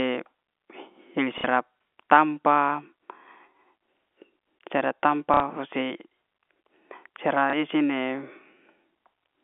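Speech carried over a telephone-band line in G.711 coding, limited to roughly 250 Hz to 3.4 kHz, breaks up three times through packet loss with the last packet repeated: at 1.38 to 1.44 s and 5.34 to 5.40 s (60 ms each) and at 7.50 to 7.53 s (30 ms). The two longer gaps are brief robotic stutters and the last a small blip, where the receiver replays the last received slice. The durations fit 30 ms packets, which puts the buzz of the two longer repeats near 33 Hz. On a waveform, the same short block appears copied back to back. On a spectrogram, the harmonic pattern freezes into identical repeating slices.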